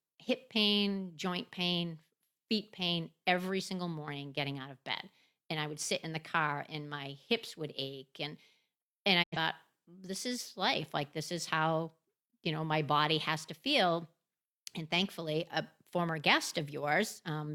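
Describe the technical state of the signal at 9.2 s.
A digital broadcast dropout runs from 9.22 to 9.37 s: the receiver lost valid frames and muted until clean ones returned. The speech fades out over about 20 ms into silence. The missing stretch of roughly 85 ms fits two dropped frames, and that audio is gone.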